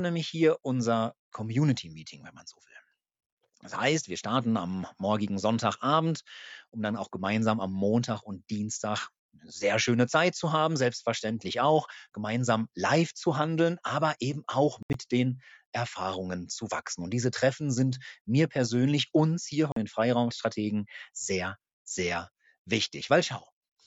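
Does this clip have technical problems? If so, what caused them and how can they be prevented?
Yes, there are two short holes in the sound, likely Bluetooth dropouts. At 14.83 s about 87 ms of audio vanishes, broken up over roughly 116 ms, with the longest gap 73 ms. At 19.72 s a cleaner 44 ms gap appears. Each time the sound comes back further along, as if it had kept playing, which points to a handful of wireless packets arriving too late and being thrown away. To prevent this, keep the headphones close to the source and away from Wi-Fi congestion or obstructions.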